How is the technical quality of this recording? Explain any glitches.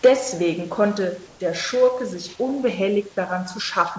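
The recording opens with a brief distortion and a small level drop, and later has a short patch of flat, artificial background. The whole clip has a wideband call sound with nothing above 8 kHz, which fits a wideband codec such as G.722. Room noise sits about 29 dB below the speech.

Microphone overload, 0.05 to 0.08 s: a harsh, crackling edge on the first loud peak. The input likely ran about 5 dB past the converter's limit, so a large share of the waveform tops were flattened off, turning clean peaks into buzzy distortion.

Microphone volume stepped down, at 0.06 s: the speech and the background together drop by about 2 dB in a single step, right inside that distorted peak. The call software likely reacted to the overload by cutting the device's input volume all at once.

Comfort noise in place of the background, 1.28 to 1.40 s: for 120 ms the room's natural background becomes a smooth, featureless hiss about 2 dB quieter. 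The sender likely paused transmission when no speech was detected, and the receiver filled that gap with synthetic noise that only approximates the real room.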